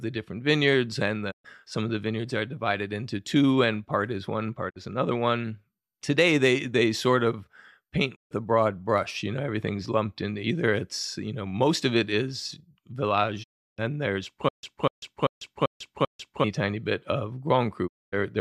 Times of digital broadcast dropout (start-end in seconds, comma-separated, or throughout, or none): 1.30-1.46, 4.69-4.77, 8.14-8.33, 13.42-13.80, 17.86-18.14